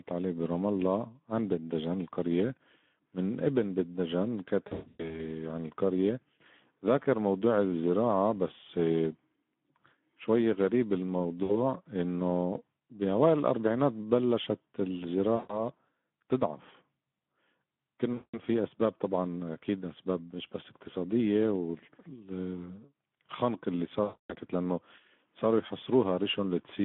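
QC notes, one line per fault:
Throughout: Speex codec. The speech sounds hoarse and grainy, with a thin, boxed-in tone. It is coded by Speex at about 11 kbps inside a 200 Hz to 3.4 kHz line band, where too few bits for the excitation leave plainly audible roughness and nothing above the telephone band.
4.67 to 5.29 s, 11.43 to 11.58 s, 15.35 to 15.65 s, 18.14 to 18.40 s, 24.03 to 24.34 s: VoIP packet loss concealed by the speech codec. The speech smears into a buzzy tone or coloured noise that fades, then recovers weakly. Lost packets, from 60 ms up to 280 ms per event, were filled by extrapolating the last pitch and filter at falling gain. In the first event the gaps are scattered over 320 ms, and the longest single gap is 120 ms.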